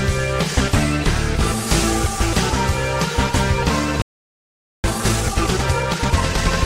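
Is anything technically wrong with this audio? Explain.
Yes, there are two related faults.

From 4.02 to 4.84 s there is a playback stall: the sound stops partway through and the output stays silent for about 0.82 s. The likely cause is that the player either ran short of data or had its processing thread held up, so nothing reached the output until it recovered. A brief dropout would lose only a sliver of audio. This is a sustained halt, and the hurried passage that follows is further evidence that the player was stalled, not that the audio itself had a gap.

From 4.84 to 6.48 s comes time-compressed catch-up. The player clears the backlog the stall built up by removing small pieces of audio and cross-fading across the joins, so the sound runs at 1.5 times normal speed. The pitch stays where it was. That separates it from a plain sample-rate or clock error, where faster playback would also raise the pitch. 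Here only the pace changes.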